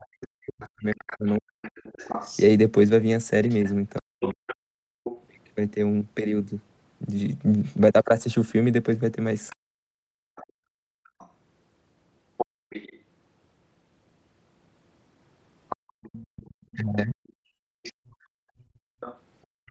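A speech recording, and it's got classic echo-canceller trouble. Speech suppressed in double talk hits from 0 to 4.43 s, 9.62 to 10.15 s and 16.76 to 17.2 s. The talker dips by up to around 40 dB in bits, likely because the canceller couldn't tell them from the far end while both were talking. The other side's voice leaking through runs from 0.04 to 5.23 s at roughly 10 dB under the talker, then from 9.48 s to the end at roughly 20 dB under, likely from loudspeaker echo the canceller didn't fully remove. You'll also hear background gated by the echo canceller, where the room tone ducks hard while the loudspeaker plays: about 38 dB at 4.71 to 5.04 s, about 35 dB in patches between 10.45 and 12.68 s, and about 36 dB from 15.76 s to the end. The top end stops at 8 kHz, which fits Opus on a call path.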